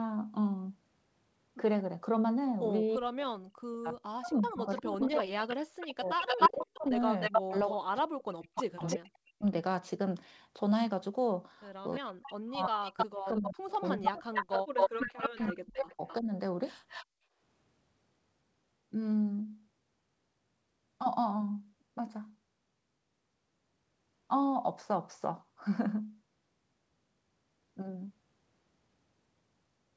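From 2.97 to 9.45 s and again from 12.02 to 16.3 s, the speech dips by up to about 40 dB and breaks up, likely speech suppressed in double talk, with the canceller ducking the near talker while the far side speaks. Overlapping these, a copy of the voice returns 305 ms late at 4.31–7.99 s and 11.92–16.15 s at about speech level, and at 8.55–8.97 s somewhat quieter, likely echo leak through a loudspeaker path the canceller did not fully remove. A fainter echo leak at 16.88–17.06 s arrives 259 ms late, likely echo leak, well below the speech. From 17.06 to 17.39 s the room sound drops by about 37 dB and then returns, background gated by the echo canceller as it clamped the microphone.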